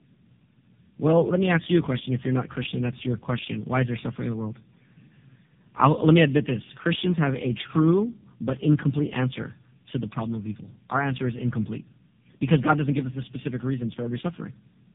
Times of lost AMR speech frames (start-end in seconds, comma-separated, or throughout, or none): none